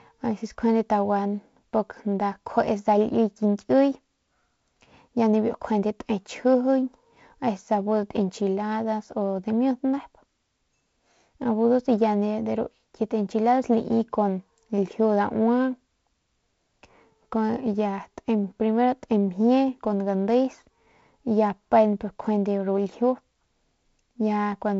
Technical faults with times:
none

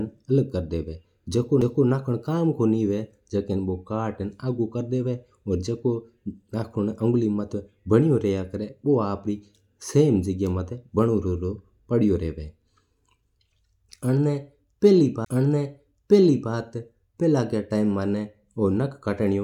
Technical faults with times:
1.61 CD skip
15.25 CD skip

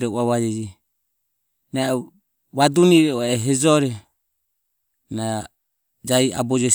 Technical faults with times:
none

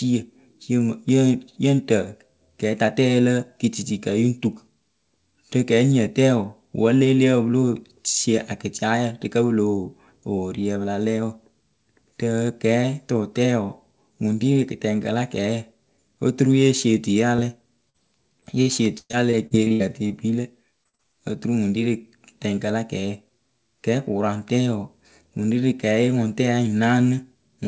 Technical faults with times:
17.36-17.40 short concealed packet loss
17.90-17.96 short concealed packet loss
18.40-20.12 repeated packet loss (robotic sound)
20.84-21.01 short concealed packet loss

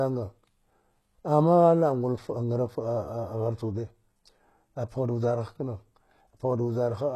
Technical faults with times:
0.00-7.15 HE-AAC compression

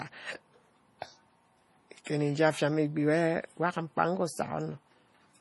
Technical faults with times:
0.00-5.41 MP3 compression
2.04-2.06 pre-echo

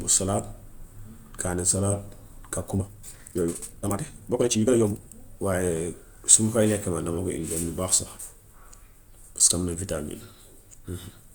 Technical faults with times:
2.72-5.00 time-stretched section

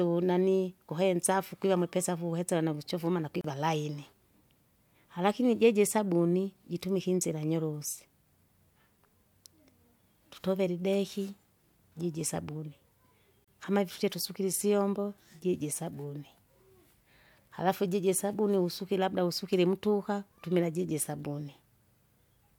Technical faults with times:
3.41-3.44 gap at a join of encoded pieces
13.44-13.48 gap at a join of encoded pieces

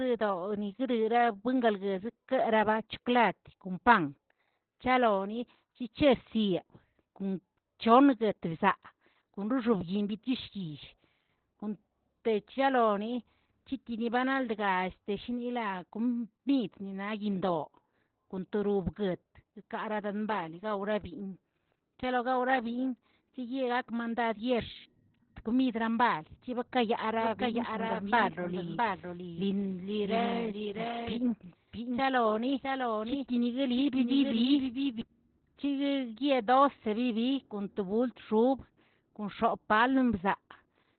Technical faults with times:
0.00-40.99 Opus voice compression
27.21-35.01 doubled audio track

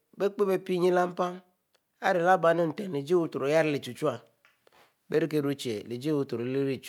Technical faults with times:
none

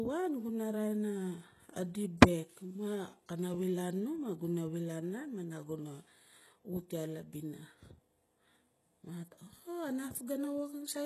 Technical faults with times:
0.00-11.05 HE-AAC compression

